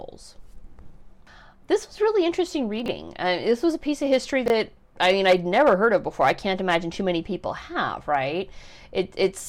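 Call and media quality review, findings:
Brief garbled, jumbled speech at 2.80–2.88 s and again at 4.46–4.50 s. Chunks out of order: a 20 ms chunk played three slots late, then one slot late, giving hard joins. Points to jitter buffer or packet reordering.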